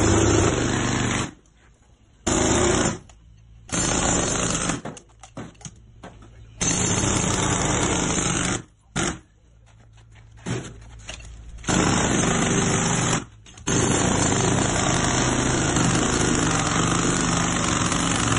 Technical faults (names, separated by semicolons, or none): none